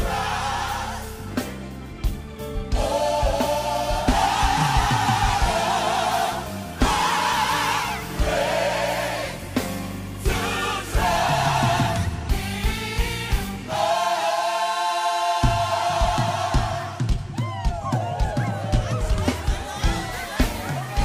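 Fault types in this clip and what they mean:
No technical faults are audible.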